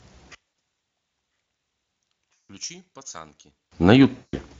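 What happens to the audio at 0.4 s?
One channel inverted, from 0.35 to 3.72 s: the level drops by about 24 dB and the centred speech fades to a faint residue, likely because one stereo channel's polarity is reversed so their shared content cancels when summed to mono. VoIP packet loss concealed by the speech codec follows from 0.47 to 0.53 s. About 60 ms of audio goes missing, which fits three lost 20 ms frames, and the decoder stretches the last sound into a fading fill.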